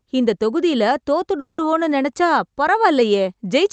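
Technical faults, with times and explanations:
1.39–1.63 s, call audio freeze: right after "இந்த தொகுதில" the sound stretches into a fading buzz, then about 130 ms of near-silence, likely because the jitter buffer ran dry waiting on late packets. Nothing's lost; the audio resumes where it stopped, roughly 190 ms later.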